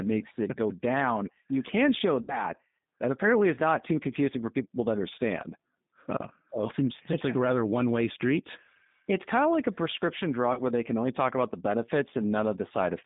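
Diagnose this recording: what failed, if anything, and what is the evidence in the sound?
G.729 codec, throughout the clip, at the codec stage: the speech is confined to roughly 150 Hz to 3.7 kHz, with a plainly audible rough, synthetic edge. That fits an 8 kbit/s G.729A stream, which rebuilds the voice from a vocal tract filter, a pitch predictor and sparse pulses rather than the actual waveform.

VoIP packet loss concealed by the speech codec, at the network stage: at 2.22 to 2.45 s, after "down you can show", about 60 ms of audio is missing, and at 10.53 to 10.61 s, between "of like a prescription" and "where they can only", about 40 ms is missing. The decoder stretches its last pitch and filter into a buzzy tone or coloured noise that fades, and the sound stays weak until its state recovers.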